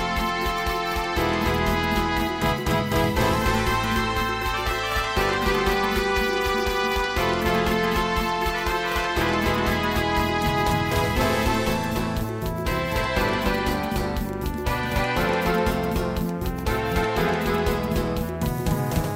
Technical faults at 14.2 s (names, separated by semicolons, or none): doubled audio track